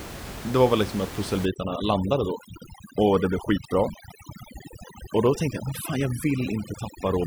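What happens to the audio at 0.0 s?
The audio is intact at 0.0 s, with only the room noise of the recording space sitting about 11 dB below the speech.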